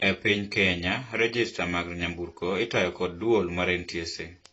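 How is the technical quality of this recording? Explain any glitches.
The speech is clearly degraded throughout by AAC compression. Nothing is heard above 7.9 kHz, and sibilants fizz and warble, which points to AAC-LC at a low bitrate, likely around 24 kbps. A plain low-pass filter would dull the sound without that churning texture.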